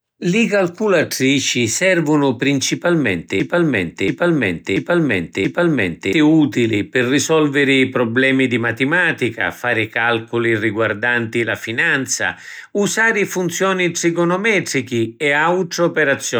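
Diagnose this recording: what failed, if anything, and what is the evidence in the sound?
A playback or stream buffer likely stalled and kept re-sending the last chunk it held, producing a broken-record loop. Right after "calculatrici servunu principalmenti", from 3.40 s to 6.13 s, a 0.68 s fragment of speech repeats exactly four times back to back. There is no variation between passes. When normal flow resumes at "utili pi risolviri prublemi", the speech that should have filled those 2.7 seconds is missing.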